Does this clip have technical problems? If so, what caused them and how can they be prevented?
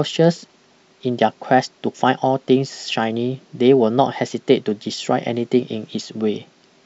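No, nothing in this speech recording points to a technical fault, so there is no cause to trace and nothing to prevent.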